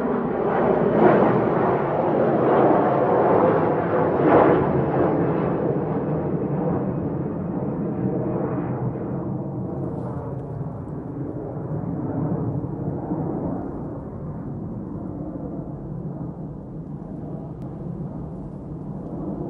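From 17.62 s to the end, a doubled audio track appears: the same sound plays a second time, around two seconds late and about as loud as the original. This is likely a second capture path or an edit leaving two out-of-step copies mixed together. Unlike an echo or reverb, the lagging copy is full-band, has no decay or room colour, and cuts in abruptly rather than trailing off.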